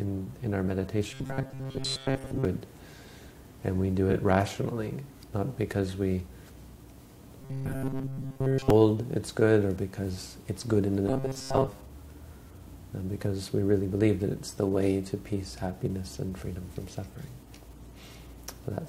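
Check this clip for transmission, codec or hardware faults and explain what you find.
Two kinds of fault show up here: a robotic buzz in three spots and two small frame-order scrambles.

Robotic sound from repeated short buffers hits at 1.11–2.45 s, 7.42–8.70 s and 11.08–11.69 s. Each time the sound locks into a rigid, metallic buzz at 134 Hz. That's likely a tiny buffer of about 7.5 ms being replayed while fresh audio is missing. Roughly two thirds of the first and third spans are repeats, and all of the middle one.

Frames out of order show up at 2.17–2.31 s, where two blocks of about 70 ms each swap places, and at 4.10–4.15 s, where two roughly 23 ms blocks swap. You get a quick garbled flutter. Nothing gets dropped, just reshuffled.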